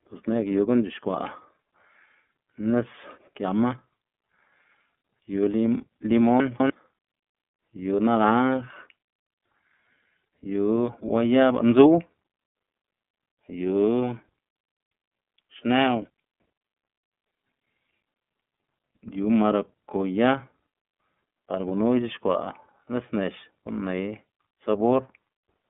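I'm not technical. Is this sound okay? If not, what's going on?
No. Two problems can be heard in this speech recording.

The first runs through the whole clip. The speech has been squeezed by the iLBC codec, a compression method used for internet phone calls. It keeps only a narrow telephone band, and nothing above about 3.7 kHz gets through, so the voice sounds boxed-in and dull. It also rebuilds the sound in separate 30 ms slices, which makes the speech slightly rough and synthetic throughout. This damage is plainly audible.

The second is a brief fault between 6.4 and 6.7 s, where chunks are out of order. The audio there is split into pieces about a tenth of a second long, and one piece arrived two places late. It plays after the two pieces that should have followed it. Nothing is missing, but that moment sounds jumbled, and there are three hard joins between the misplaced pieces.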